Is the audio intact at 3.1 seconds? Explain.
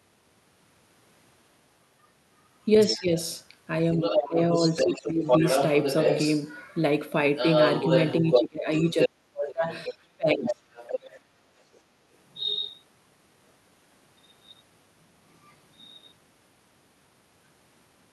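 No. At 3.1 s the speech sits inside a span from 2.87 to 3.15 s where speech suppressed in double talk pulls the level down by around 10 dB at its deepest. The likely cause is an echo canceller that could not separate the near talker from loudspeaker echo while both sides spoke, so it attenuated everything together.

Just before that, from 2.8 to 3.03 s, the other side's voice leaking through is audible as a second voice about 10 dB below the speech. It is likely residual loudspeaker echo the canceller failed to remove, and it overlaps the start of the dip.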